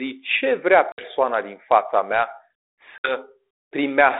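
At 0.92 s, between "ce vrea" and "din fața", and again at 2.98 s, packet loss on an ADPCM call leaves a hard 60 ms silence. Unlike a plain dropout, speech then returns slightly distorted while the decoder's predictor and step size resettle.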